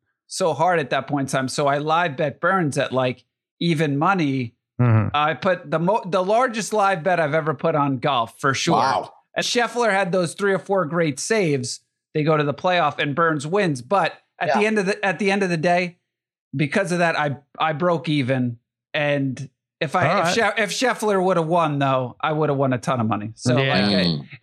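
At 9.41 s, just before "had those three or", compressed frames are skipped: roughly a fifth of a second of speech never plays, likely around ten frames of about 23 ms lost or rejected as damaged.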